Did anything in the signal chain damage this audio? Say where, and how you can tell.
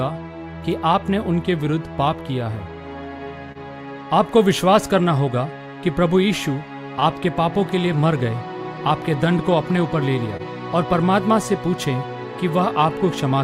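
Yes. The network and jitter-buffer stage introduced timing faults. Small, unevenly spaced hiccups recur through the whole clip. This is clock drift between sender and receiver: the sender's clock runs about one and a half percent slow, so the receiver's buffer keeps draining and must be propped up.

From 0.13 to 3.26 s small edits recur, unevenly spaced. These are repeated timing corrections: the receiver repeats short pieces, playing at 99% speed and adding roughly 50 ms overall, to stay level with the slower sender.

At 3.52 to 3.58 s and again at 10.37 to 10.42 s, a sound is briefly held too long, with a slight buzz or dip. Each is a short stall from a late packet. The buffer ran empty, so the receiver stretched the last sound by 29 ms and 25 ms respectively, then resumed with nothing missing.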